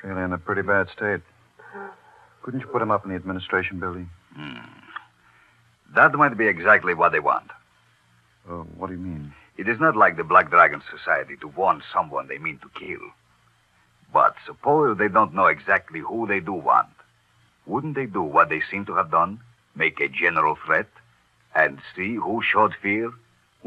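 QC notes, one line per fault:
8.68–8.75 s, 10.90–10.92 s, 12.83–12.88 s, repeated frames: a single 26.1 ms chunk gets replayed three times, then once, then twice. That's a quick stutter, and it adds about 78, 26 and 52 ms to the clip.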